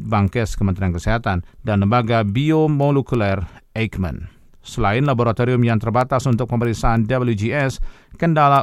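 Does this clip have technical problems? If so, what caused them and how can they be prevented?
Yes, there are word clock ticks in this speech recording, running from about 0.28 s to 8.56 s. They come at a steady rate of roughly one every third of a second, so around thirty in all. That pattern fits a digital link where the receiving device ran on its own clock, off from the sender's by something like 70 ppm. Each time the two clocks slipped past each other, a sample got dropped or repeated and a few were misread, which gives you a tick. To prevent it, lock the receiving device to the incoming signal or to a shared master word clock.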